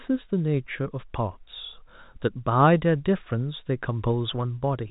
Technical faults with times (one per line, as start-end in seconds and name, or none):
none